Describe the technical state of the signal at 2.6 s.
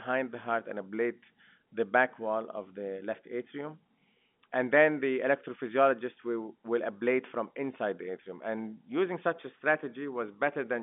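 At 2.6 s the signal is intact, carrying the speech through ordinary G.711 telephone coding with its usual narrow line band of roughly 200 Hz to 3.5 kHz and nothing above about 3.8 kHz.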